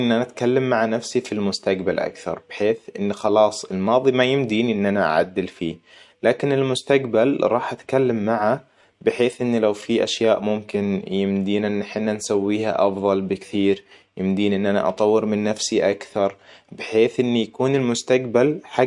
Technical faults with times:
none

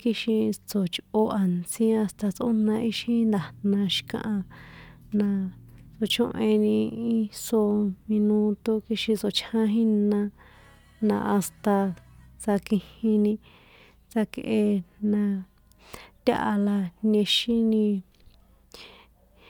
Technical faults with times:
none

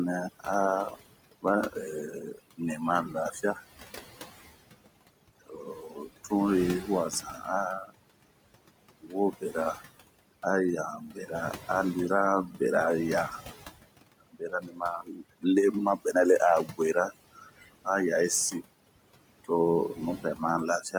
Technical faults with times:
0.00-20.99 overdone noise removal
0.00-20.99 noise suppressor artifacts
0.32-3.84 speech cut by the noise suppressor
4.42-7.94 speech cut by the noise suppressor
8.91-9.82 speech cut by the noise suppressor
10.98-11.64 speech cut by the noise suppressor
12.46-12.61 speech cut by the noise suppressor
14.21-17.88 speech cut by the noise suppressor
18.51-20.95 speech cut by the noise suppressor

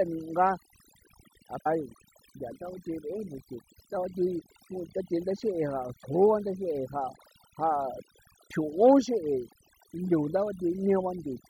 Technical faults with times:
0.00-11.50 overdone noise removal
1.65 stream segment skipped

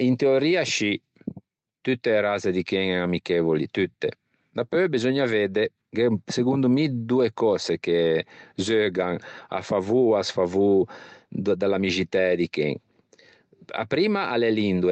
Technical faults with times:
none

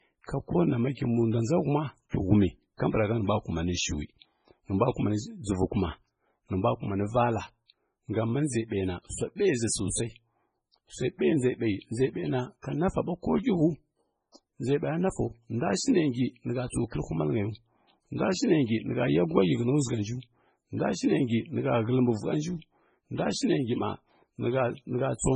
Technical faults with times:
0.00-25.35 MP3 compression

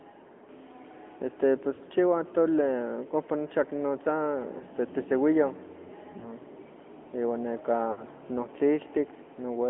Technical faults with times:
0.00-9.70 AMR narrowband mobile codec
1.74-1.80 lost AMR speech frames
4.58-4.64 lost AMR speech frames
6.20-6.32 lost AMR speech frames
7.92-8.05 lost AMR speech frames

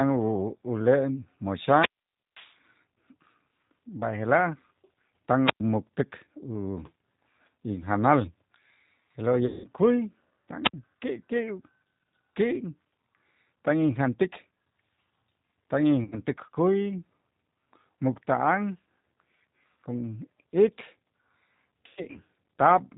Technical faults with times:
0.00-22.98 G.729 codec
1.55-2.60 wireless microphone squelch dropout
5.42-5.61 wireless microphone squelch dropout
9.46-9.66 VoIP packet loss concealed by the speech codec
10.64-10.73 wireless microphone squelch dropout
16.04-16.20 VoIP packet loss concealed by the speech codec
21.87-22.18 VoIP packet loss concealed by the speech codec

